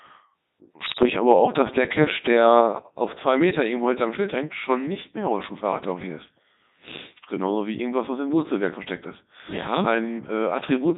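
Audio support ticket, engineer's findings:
Codec 2 vocoder, whole clip. Speech path carried at 3.2 kbit/s; decoder rebuilds the voice from pitch, voicing, energy and envelope parameters with sine synthesis, so the original waveform is discarded. Result: heavily robotic, buzzy speech with smeared, synthetic-sounding timbre throughout.

Bit errors on digital voice radio, 0.85 to 1.10 s. Corrupted bits, at an error rate around 7 percent, reaching the vocoder parameters across 10 frames. Each bad bit skews pitch, level, voicing or spectrum for a whole frame. Audible as sudden pitch and level jumps, warbling bleeps and garbled robotic noise for a quarter second.

Microphone volume stepped down, 2.61 s. Likely the call software's automatic input gain control cutting device volume in a single step after judging the mic too hot. Heard as an abrupt drop of about 4 dB in speech and background together, with no fade.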